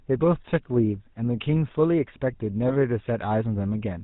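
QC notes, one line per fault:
Throughout: GSM full-rate codec. The speech has a buzzy, gravelly roughness from a pulse-driven vocal-tract model at 13 kbps, with audible damage. On a spectrogram, energy stops sharply near 4 kHz, and harmonics look smeared and grainy instead of cleanly striated.
2.68 to 2.73 s: lost GSM frames. One frame, about 20 ms, was filled by repeating the previous frame's settings, leaving a brief metallic ring. The waveform shows a short repeated pattern, and the spectrogram shows a frozen, smeared slice.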